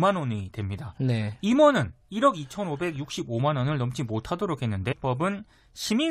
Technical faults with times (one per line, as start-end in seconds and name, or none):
4.91-4.93 stream segment skipped